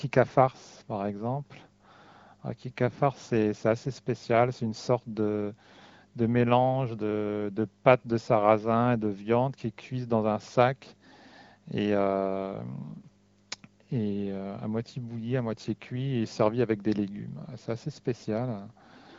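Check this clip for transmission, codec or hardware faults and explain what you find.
No transmission, codec or hardware fault turns up anywhere in the clip. The speech comes through an AMR wideband (HD Voice) link running at 15.85 kbit/s, a rate that keeps speech clear, with only light coding texture audible.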